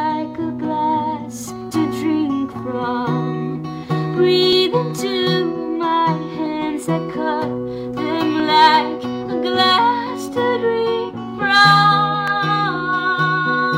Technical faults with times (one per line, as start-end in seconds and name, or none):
0.65-12.28 clock drift buffer slips